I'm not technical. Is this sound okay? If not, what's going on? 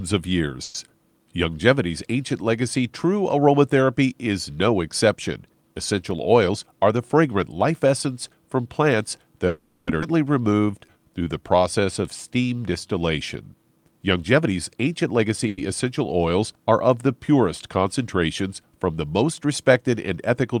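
No, there are a few connection hiccups in this speech. Call audio freezes at 0.63 s, 9.47 s and 15.48 s stretch the last sound into a brief fading buzz for roughly a tenth of a second, then nearly half a second, then a tenth again, likely because packets arrived late.

At 6.11 s a DC step gives a low thump as the waveform's baseline jumps, and it stays shifted to the end.

A jitter buffer speed-up runs the speech about 7% fast from 6.49 to 8.07 s, and about 10% fast from 13.54 to 15.47 s. The pitch stays the same, it just sounds hurried.

At 10.01 s a skip ahead jumps past roughly a third of a second of speech, joining the two sides almost seamlessly.

From 10.41 to 12.99 s a jitter buffer slow-down drags things to about 89% speed, adding 286 ms by repeating tiny slices, so sounds get drawn out.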